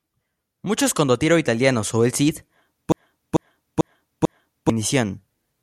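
From 2.92 to 4.70 s a broken-record loop repeats one 0.44 s fragment four times back to back, likely from a stalled stream resending its last piece. Unlike an echo, every repeat is identical and undecayed, and the speech meant for that span is lost.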